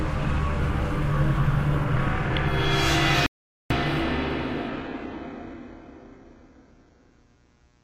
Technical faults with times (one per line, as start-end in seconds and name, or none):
0.00-7.83 mains buzz
3.26-3.70 audio dropout to silence
4.69-7.83 adaptive stream at a lower bitrate